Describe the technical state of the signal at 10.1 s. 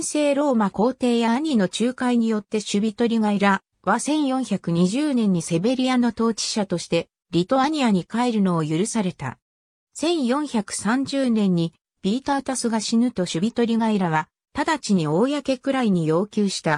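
At 10.1 s the signal is intact, with no audible dropout, distortion, or other technical fault.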